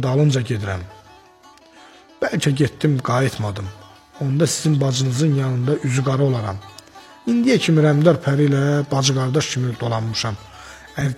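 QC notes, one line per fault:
11.01–11.07 s, damaged data in a compressed stream: corrupt frames make the decoder lose sync and hunt for the next header, leaving a brief glitch.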